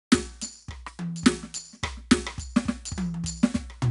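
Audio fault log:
Throughout, 4-bit ADPCM compression: coarse 4-bit steps add gritty hiss that follows the music's level; the spectrogram shows noise tracking loudness and a hard cutoff at 10.6 kHz.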